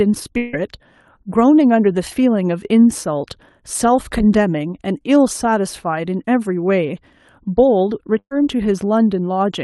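A burst of packet loss hits from 8.19 to 8.33 s. About 120 ms of audio never arrived, so the receiver stretched the last sound into a fading fill before jumping ahead.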